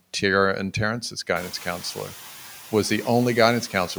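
A speech clip whose noise suppressor works throughout, pulling the bands it judges to be steady noise down by about 4 dB frame by frame. The room noise jumps by about 18 dB at around one and a half seconds, still about 20 dB under the speech, and the suppressor's gain keeps shifting on it, so the noise dips between phrases and swells under them.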